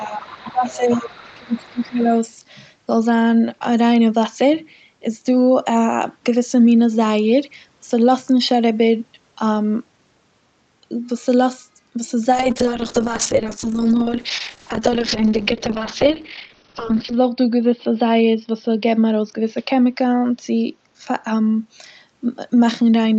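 Speech suppressed in double talk runs from 0.00 to 1.16 s and again from 1.34 to 2.10 s. The talker's level dips by about 15 dB in the first stretch and about 20 dB in the second, and it thins and breaks into pieces for roughly a second and then most of a second. The likely cause is an echo canceller that could not tell the near talker from the far side's loudspeaker echo during overlapping talk, so it turned both down.

The other side's voice leaking through overlaps these dips, from 0.21 to 0.53 s and from 0.70 to 2.04 s. A second, fainter voice sits about 20 dB below the talker. This is likely loudspeaker playback reaching the microphone that the echo canceller failed to remove fully.

A call bitrate drop begins at 12.32 s and lasts until 19.38 s. The coding grows rough and watery, and the top end narrows from 8 kHz to 6 kHz, which points to the encoder falling from around 32 kbps to about 8 kbps. 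The worst stretch holds for about 4.8 s. A falling bandwidth estimate forced the Opus encoder to spend far fewer bits, so it coded more coarsely and trimmed the highs until the rate recovered.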